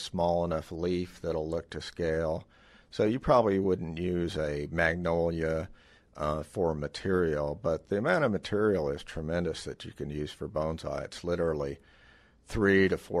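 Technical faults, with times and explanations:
No technical faults can be heard, with no times or explanations to give.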